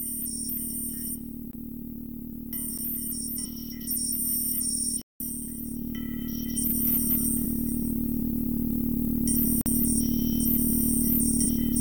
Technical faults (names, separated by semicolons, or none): block of digital silence